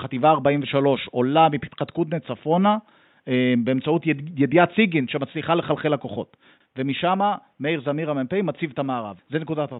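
No technical faults can be heard anywhere in this recording.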